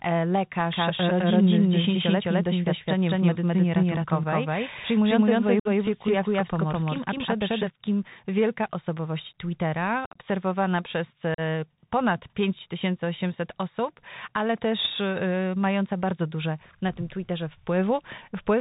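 The whole clip of speech passes through a Bluetooth CVSD headset codec at 64 kbps. Nothing above 4 kHz gets through. The one-bit step coding cannot follow fast, loud highs. So s sounds turn scratchy, and a grainy hiss sits under everything.

From 0.72 s to 7.70 s there is a doubled audio track. A second full-band copy runs about a fifth of a second behind, at roughly the same level. It has no room colour. It starts abruptly just before "wielka osobowość". This is likely a second capture path running late.

Unconcealed Bluetooth headset packet loss punches holes in the sound. At 5.60 to 5.67 s, 56 ms drops out with hard edges. From 10.05 to 10.18 s, 86 ms is lost in scattered bits across 105 ms. The longest run there is 30 ms, so it sounds chopped and crackly. At 11.34 to 11.40 s, a 38 ms hole follows. Each gap means many tiny voice packets never arrived. After each one, the CVSD audio comes back briefly quieter.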